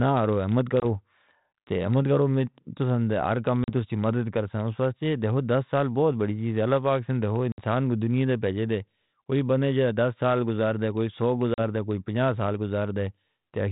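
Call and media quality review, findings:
Packet loss on an ADPCM call. Hard-edged silent holes at 0.80, 3.64, 7.52 and 11.54 s, lasting 20, 40, 60 and 40 ms. Roughly one to three packets each. Decoder predictor and step size lose sync. Speech resumes briefly distorted. Light G.726 coding grain throughout, consistent with 32 kbit/s.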